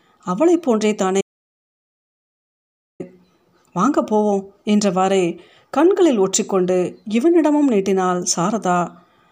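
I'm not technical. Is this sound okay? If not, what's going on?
No. At 1.21 seconds the speech drops out completely and returns at 3.00 seconds, about 1.8 seconds of dead silence with no background at all. This is an audio dropout to silence, likely from the input briefly disconnecting or muting, and anything said then is lost.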